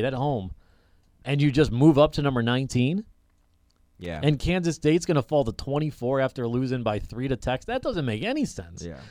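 A worn or dirty contact somewhere in the signal chain of this speech recording is making and breaking as it shifts, producing loose connector crackle from 4.01 to 4.16 s. For those 0.15 s the signal is chopped on and off in quick, uneven succession, and any DC sitting on the line turns each reconnection into a pop, so the speech is overlaid by an irregular burst of scratchy crackle.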